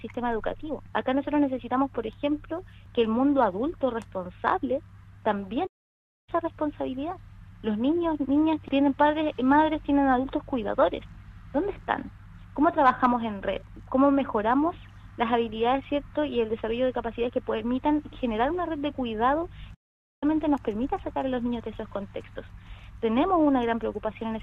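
At 5.66 s and again at 19.74 s the sound cuts to silence for 610 ms and 475 ms: playback stalls, likely from the player's buffer running dry.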